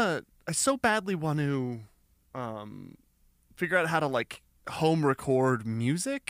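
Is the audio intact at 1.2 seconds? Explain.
Yes, the audio is intact at 1.20 seconds, with no dropout, click, distortion or other fault audible at that moment.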